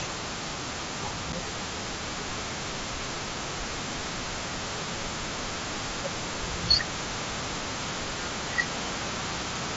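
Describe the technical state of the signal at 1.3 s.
At 1.32 s there is unconcealed Bluetooth headset packet loss: about 7.5 ms of speech drops out, which fits a single lost packet on the mSBC link. Nothing fills the gap, so the sound stops abruptly and resumes with an abrupt edge.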